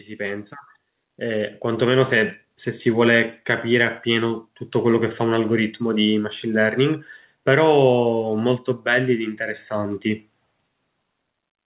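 Speech, heard through a call path that passes nothing above 4 kHz, which fits a narrowband G.711-style codec. From 0.05 to 2.4 s there is automatic gain rising. The gain control judged the input too quiet. It raised its gain gradually, by about 7 dB. Voice and background swell together over those two seconds.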